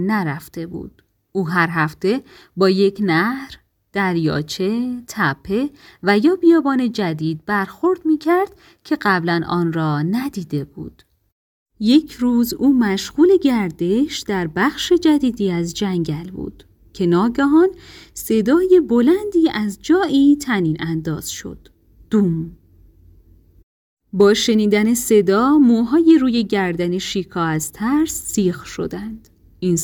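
A brief crackle on the peaks at 24.21 s and again from 26.09 to 26.11 s is hard clipping: peaks overdriven by about 1 dB are cut flat.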